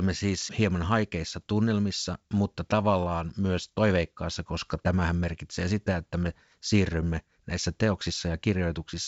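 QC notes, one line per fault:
1.37–1.42 s, bit errors on an ADPCM link: just after "siis hieman" and before "tunnelmissa mutta tavallaan myös", a short rough burst with a pop and a brief change in level lasting about 50 ms. Flipped bits knock the decoder's step size and predictor off course, so the damage rings on for a few milliseconds rather than clicking once. That ringing sets it apart from a plain dropout or a lone click. The G.722 wideband coding beneath it keeps the speech clear up to about 7 kHz.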